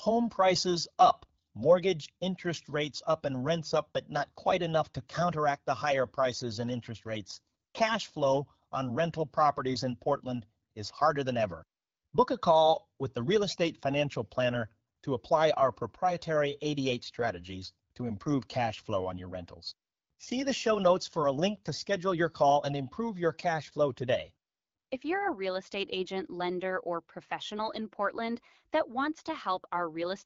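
Nothing stood out on listening to this speech, which comes through AMR wideband (HD Voice) coding at 12.65 kbit/s with only the light coding character that rate leaves.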